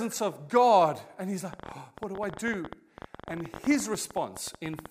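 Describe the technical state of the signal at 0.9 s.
At 0.9 s the speech signal is intact, with no audible technical fault at that moment.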